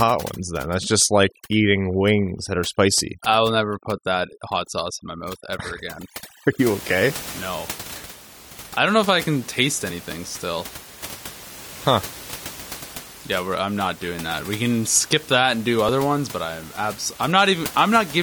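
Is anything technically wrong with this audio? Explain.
Yes, there are two faults in this speech recording.

From the start to 6.59 s there is overdone noise removal. The suppressor cuts any frequency band that sits close to its noise estimate, so the background drops and breaks up into twinkling specks. Unlike a plain low-pass or bandwidth limit, the loss flickers band by band over time. It stops after 6.59 s, where the room noise about 17 dB below the speech returns.

At 15.89 s, between "skip that and do" and "ones but I'm", there is an overlap between stream segments. Two segments claim the same stretch of time, and the player trims the shared part, removing about 17 ms of real audio. The waveform jumps, giving a small skip. Unlike a dropout, no gap of silence is inserted. The stream is cut into segments 6 seconds long.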